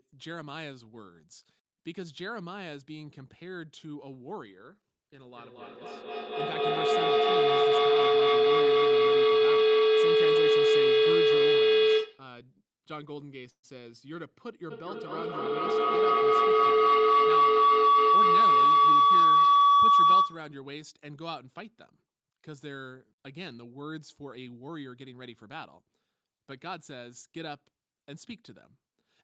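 From 5.24 to 12.37 s, a feedback howl builds as the loudspeaker-to-microphone loop gains level each pass, settling near 400 Hz and pulsing about every 200 ms, peaking about 16 dB above the speech. At 13.50 to 13.65 s, the sound stalls into a brief fading fill and about 90 ms of silence, then resumes where it stopped, likely a call audio freeze from held-up packets. From 14.71 to 20.61 s, the loop howls again, now near 1 kHz, pulsing about every 200 ms and reaching about 18 dB over the speech. From 24.22 to 25.22 s, a jitter buffer speed-up trims roughly 100 ms of excess buffered audio, so the speech runs 8% faster at unchanged pitch and sounds hurried.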